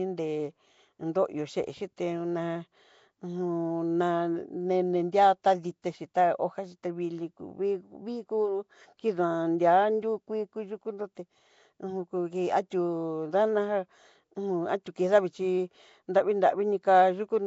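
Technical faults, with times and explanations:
Throughout, Nellymoser compression: the speech is surrounded by coarse hiss and sounds blurred and underwater, with nothing above 7.7 kHz. The cause is likely Nellymoser Asao coding at a rate that fits 32 kbps, where weak bands get no bits and are replaced by noise.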